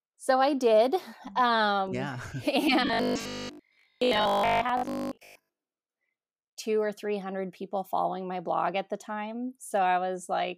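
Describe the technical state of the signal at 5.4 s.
At 5.4 s the speech carries robotic sound from repeated short buffers (2.87–5.57 s): a rigid 50 Hz metallic buzz, likely from roughly 20 ms chunks being looped. Unlike plain dropouts, there are no gaps, just a fixed-rate buzz.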